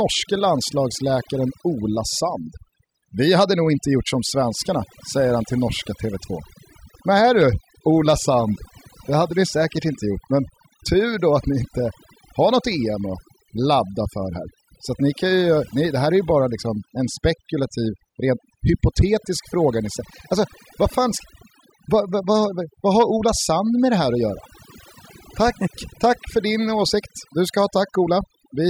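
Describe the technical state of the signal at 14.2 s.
At 14.2 s you're hearing overdone noise removal, and it's there for the whole clip. The denoiser was pushed so hard that bands near its noise estimate get pulled way down, taking quiet parts of the speech with them, and the background drops and breaks up into twinkling specks.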